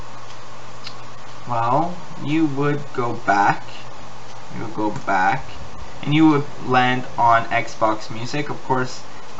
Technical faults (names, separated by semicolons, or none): none